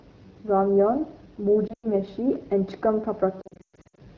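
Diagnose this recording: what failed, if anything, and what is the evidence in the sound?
The codec stage is at fault throughout: the AMR wideband (HD Voice) codec is running at one of its lowest rates, which fits 8.85 kbit/s. The speech stays band-limited to about 7 kHz but sounds rough and raspy. Unlike simple low-pass filtering, the grain comes from the coarse pulse-driven vocal tract model.

Lost AMR speech frames on the radio link cause two dropouts. From 1.67 to 1.87 s, about 120 ms of sound goes missing, with the longest gap near 100 ms. From 3.41 to 3.99 s, about 380 ms is lost in runs up to 120 ms. In each gap the decoder repeats the last sound with falling gain, dropping to near silence within two frames rather than clicking the way a buffer underrun would, and the speech returns weak or rough for a moment.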